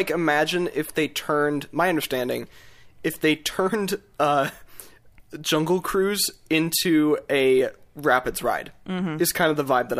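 No technical faults turn up anywhere in the speech, so there is nothing to place in time order.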